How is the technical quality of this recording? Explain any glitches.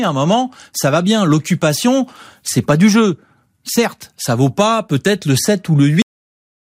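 The recording has one clear glitch, a cut-off end. At about 6.02 s the speech stops mid-sound and drops straight to digital silence for the rest of the clip. The final buffers never got written, so there's no natural decay, just an abrupt, chopped ending.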